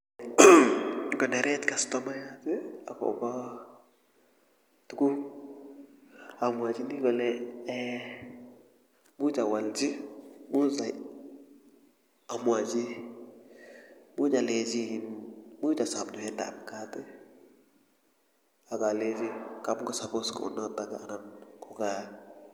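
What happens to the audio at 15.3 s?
At 15.3 s the audio is intact, with no dropout, click or distortion at that moment.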